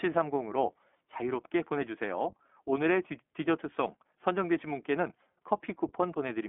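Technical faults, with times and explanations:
Throughout, iLBC codec: the speech sounds thin, boxed-in and plainly rough, with a slightly synthetic buzz, since only about 250 Hz to 3.5 kHz survives. Each short frame is coded on its own, which fits 20 ms blocks at 15.2 kbps, and the low bitrate loses excitation detail.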